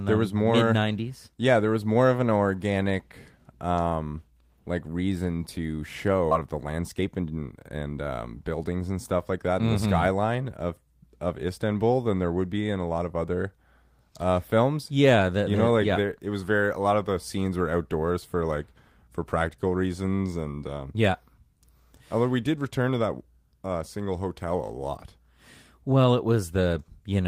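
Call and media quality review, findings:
Skip ahead at 6.31 s. Roughly a second of speech missing, joined with no gap. Audio dropped in transit or by overflowing jitter buffer, cutting delay by about a second.

Jitter buffer speed-up, 6.41 to 8.70 s. Speech runs about 112% speed, pitch unchanged, sounds hurried. Receiver trimmed short pitch-period pieces, around 300 ms total.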